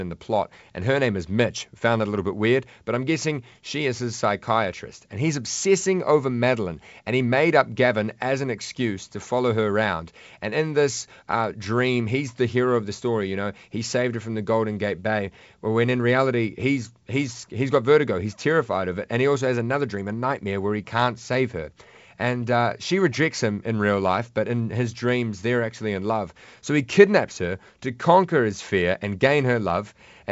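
The speech carries the normal character of G.722 wideband telephone coding at 64 kbit/s, with the band stopping at 7.7 kHz, and no fault can be heard.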